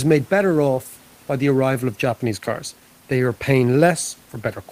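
No technical faults can be heard anywhere in the recording.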